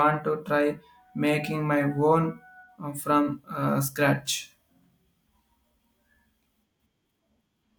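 No technical faults can be heard in this recording.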